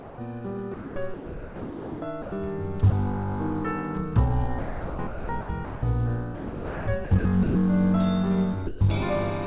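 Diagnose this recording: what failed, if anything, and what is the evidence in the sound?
Sound dropped by the voice detector, at the call-processing stage. At 0.00–0.18 s, 2.90 s and 8.67–8.81 s, sound gives way to steady noise. The sender's detector likely misjudged it as background.

Sound chopped by the voice detector, also in call processing. During 0.74–2.32 s, 4.45–5.83 s and 6.35–7.55 s, sound turns choppy. The detector likely kept switching transmission off and on.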